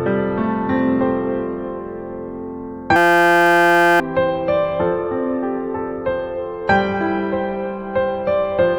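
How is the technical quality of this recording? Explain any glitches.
The recording has one serious glitch, a system hang loop from 2.96 s to 4.0 s. For about a second the sound is replaced by a steady, harsh buzz pitched around 172 Hz. That tone comes from a single 5.8 ms fragment repeating exactly, which fits a 256-sample buffer. The playback system froze while the audio hardware kept replaying its last buffer, and roughly a second of the real audio is gone.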